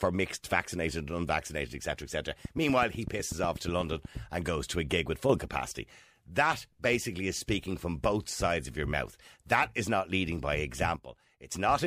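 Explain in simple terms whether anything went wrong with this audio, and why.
From 2.45 to 4.18 seconds there is a train of clicks. About fifteen sharp ticks arrive at a steady pace, roughly eight every second. Each one sounds much the same, and they stand out above the speech itself. They sit on top of the talking rather than being part of it. The likely cause is interference from nearby equipment or a faulty connection or power supply, briefly adding a pulse again and again.

There are also two sudden gain jumps. At 5.29 seconds the volume leaps up, to about double, and stays raised until 5.39 seconds. From 10.96 to 11.52 seconds it drops sharply, to roughly a third of its level. Each change happens instantly, with no fade. The speech and the quiet hiss behind it shift together, which is the giveaway. The likely cause is a gain setting being changed abruptly.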